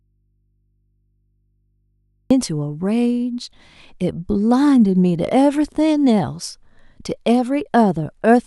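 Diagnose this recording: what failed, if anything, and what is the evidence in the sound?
Audio dropout to a faint residue from the start to 2.31 s: only hum about 50 dB down, likely an open analogue connection. Spectrogram: faint hum lines, then speech returns abruptly.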